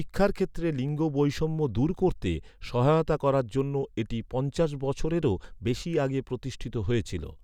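The clip is speech with a single DC step at 0.89 s, just before "বৈষম্য দূর করতে সহায়তা". The waveform's zero line jumps suddenly, by about -39 dBFS. That jump sounds as a brief low thump. The offset then decays away, as a 20 Hz high-pass drains it.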